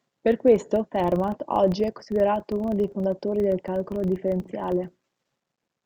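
Filter restarted on every block, throughout the speech: the filter discards its state at each block boundary and begins again from silence, so every block opens with a small transient. These repeat every 40 ms, giving a 25 Hz buzz that rises and falls with the speech level.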